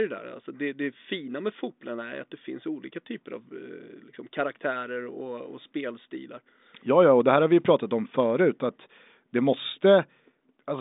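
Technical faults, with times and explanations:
No technical faults can be heard in this recording.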